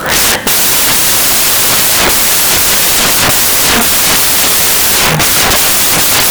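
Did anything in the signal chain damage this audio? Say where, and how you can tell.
Yes: samples built from the wrong bytes, throughout, at the sample-format conversion stage; misassembled bytes turn low bits into loud broadband noise.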